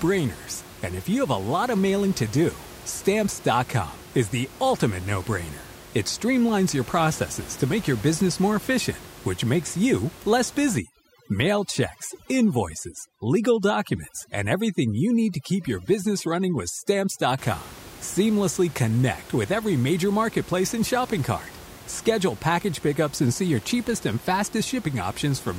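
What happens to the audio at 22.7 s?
Nothing goes wrong at 22.7 s: the speech carries on intact, with only the room noise sitting about 19 dB beneath it as part of the recording itself.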